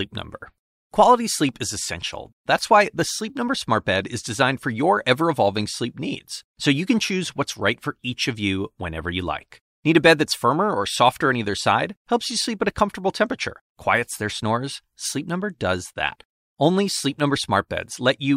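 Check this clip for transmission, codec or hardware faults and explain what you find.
Nothing stands out as a fault anywhere in the speech, so there's nothing here to report.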